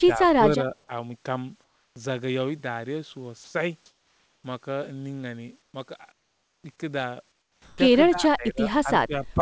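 At the very start, from 0.0 to 0.9 s, the speech is pulled down by about 10 dB in patches adding up to about half a second. This is speech suppressed in double talk: the likely cause is an echo canceller that could not tell the local talker from loudspeaker echo while the far side was speaking, so it attenuated both, and the voice sinks in level and loses presence.

From 1.64 to 1.96 s the real background is gone, replaced by comfort noise in place of the background. The sender's voice detector likely judged the pause as non-speech and stopped sending, so the receiver generated a flat synthetic noise instead. This one sits about 5 dB below the surrounding room sound, which already lies roughly 46 dB under the loud passages, so the pause goes smooth, featureless and slightly quieter.

Between 3.44 and 3.54 s, 100 ms of actual sound is dropped by the voice detector. The sound was likely mistaken for background and not transmitted, so that tenth of a second gives way to steady noise before the signal returns.

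Comfort noise appears again from 3.86 to 4.44 s (about 2 dB quieter), 5.62 to 5.74 s (about 5 dB quieter), 6.12 to 6.64 s (about 8 dB quieter, the largest drop), and 7.32 to 7.78 s, where the fill is instead about 4 dB louder than the real background. Each time the natural texture of the room is swapped for a uniform hiss.

At 7.76 to 7.78 s, right where that last fill ends, comes an onset clipped by the voice detector. The detector was likely slow to register that speech had resumed, so the first 20 ms were not sent, and the sound starts abruptly, without its soft attack.

The ending brings more speech suppressed in double talk: from 8.10 to 8.62 s with dips of about 15 dB, briefly at 8.83 to 8.88 s with about 5 dB, and from 9.05 to 9.40 s with about 15 dB again. The voice ducks and thins in chunks while the other side talks over it. Throughout, the G.722 call path cuts everything above 8 kHz.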